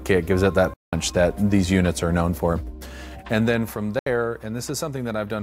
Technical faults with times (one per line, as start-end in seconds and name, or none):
0.74-0.93 Bluetooth dropout
3.99-4.07 Bluetooth dropout